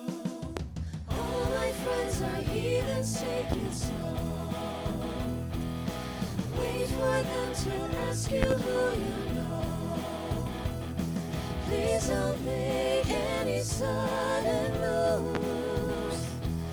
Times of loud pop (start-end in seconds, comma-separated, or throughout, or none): 0.57-0.60, 3.52-3.56, 8.43-8.54, 15.35-15.39